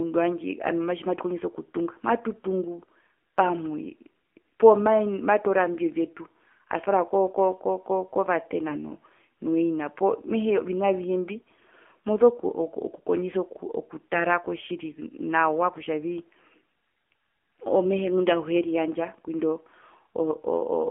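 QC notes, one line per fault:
Throughout, AMR narrowband mobile codec: the speech is confined to a telephone band of roughly 250 Hz to 3.4 kHz, with nothing above 4 kHz, and at about 7.4 kbps the vocal-tract model leaves the voice plainly buzzy and synthetic.
8.68–8.80 s and 11.38–11.48 s, AMR bit errors: two short bursts where the voice holds its pitch and level but turns hoarse and gargly, because corrupted low-priority bits misplace the excitation pulses and skew gain and spectral detail. The first burst is heavier, at roughly 7 percent bit errors against about 4 percent.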